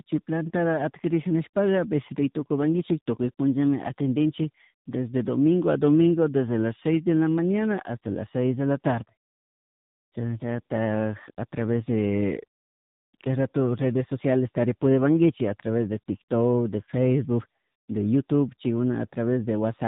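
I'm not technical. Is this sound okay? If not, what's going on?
No. Tandem speech coding: the speech passed through two phone speech coders in a row. Each roughened it further, so it sounds muffled and warbly throughout.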